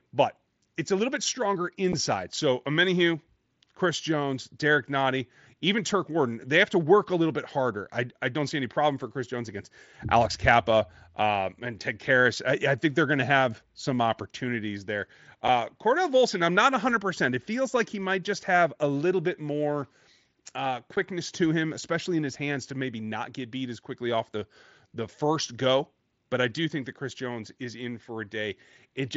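Short, hard-edged dropouts sit at 1.92 s after "a little bit stronger", 15.48 s after "have some opportunities there", and 20.96 s before "to him especially in". This is unconcealed Bluetooth headset packet loss: a 7.5 ms voice packet on the mSBC link vanished, and silence or an idle pattern filled the gap.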